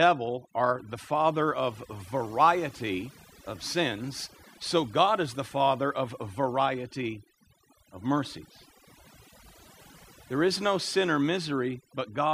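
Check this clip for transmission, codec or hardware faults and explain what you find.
The clip shows one fault, present throughout: overdone noise removal, a processing fault rather than a transmission or hardware one. An overly aggressive suppressor mutes frequency bands near its noise estimate. Pauses drop to near silence with twinkling specks.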